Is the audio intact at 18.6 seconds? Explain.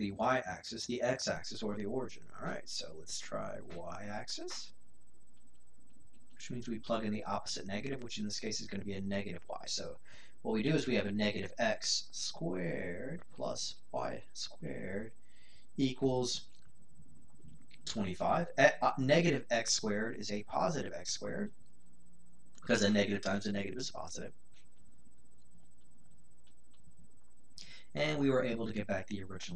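No. At 18.6 s the audio sits inside a DC step that begins at 1.36 s and holds to the end of the clip. The waveform's zero line jumped by about -42 dBFS and never returned, so the whole signal rides on a constant offset. The step itself was a single low thump at 1.36 s. On a waveform the trace is displaced off centre, and a spectrogram shows a vertical click at onset and a steady band at 0 Hz.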